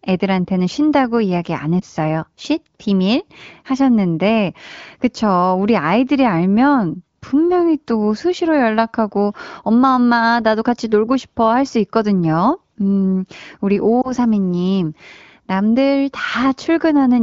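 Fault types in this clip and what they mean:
Lost AMR speech frames: Two short dips or warbles in the speech, at 1.79 to 1.84 s and 14.02 to 14.11 s, each followed by the voice returning weak or rough for a moment. Each fits a single lost 20 ms frame. Radio errors made the frame fail its checksum, so the AMR wideband decoder filled the gap by reusing the last good pitch and vocal tract settings at lowered gain, then resumed normal decoding.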